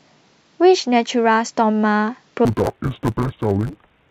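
From 2.45 s to the end, interleaved audio read as planar: each 10 ms block gets split into halves, so the speech turns dull and robotic with a 100 Hz buzz.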